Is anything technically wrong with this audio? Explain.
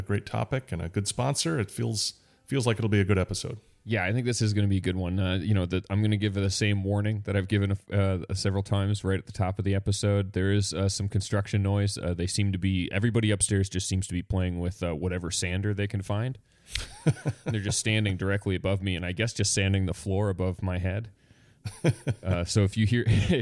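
No, nothing technically wrong can be heard in this audio. The sound runs on without any event that would need explaining.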